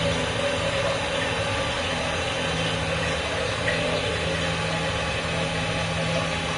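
Throughout, the sound is hissy and grainy, with roughened tones and smeared attacks, and nothing above 10.6 kHz. That is likely Vorbis compression at a low bitrate, around 33 kbps: coarse treble quantisation turns fine detail into noise. A spectrogram shows a hard ceiling and speckled upper bands.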